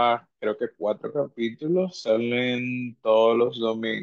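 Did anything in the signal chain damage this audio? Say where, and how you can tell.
Yes. From 1.04 s to the end, the speech abruptly slows to 0.625 times its pace and drags, a time-stretched section. Pitch holds steady, unlike a slowed playback clock, which would drop it. This is likely software repeating short pieces to lengthen the audio.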